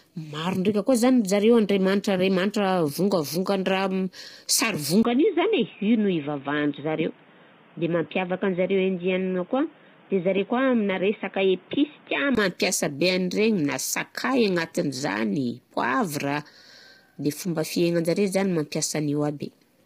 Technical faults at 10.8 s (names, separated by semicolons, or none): low-delay AAC compression; input switched to a poorer device